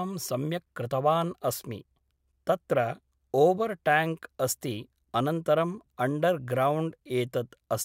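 No technical faults occur at any point in the speech, so there are none to describe in time order.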